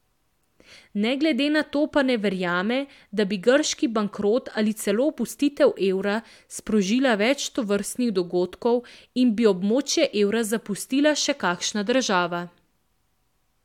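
Nothing stood out on listening to this speech recording.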